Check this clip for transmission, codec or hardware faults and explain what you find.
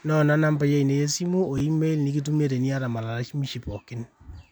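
One fault is present, a brief ordering error in the speech. From 1.58 to 1.60 s there is a short garbled stutter, caused by chunks out of order: one 11.6 ms chunk arrived a chunk late and played after its successor, leaving three hard joins.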